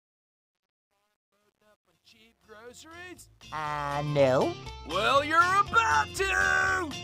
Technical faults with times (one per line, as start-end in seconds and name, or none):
0.00-4.22 truncation distortion on a fade